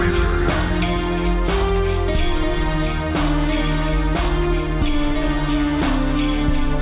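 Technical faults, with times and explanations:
Throughout, wrong sample rate: played back at half its recorded rate without conversion, which fits 16 kHz audio run at 8 kHz, so everything drags at half speed, a full octave lower.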